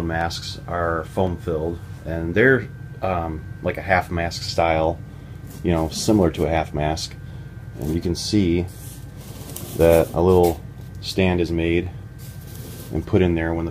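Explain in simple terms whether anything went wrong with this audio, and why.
A click repeats about every 1.06 seconds, from 0.21 s to 12.92 s, which points to clock drift buffer slips. Two devices' clocks likely disagreed, so a few samples were dropped or repeated. Unlike random glitches, these clicks keep a perfectly steady rhythm.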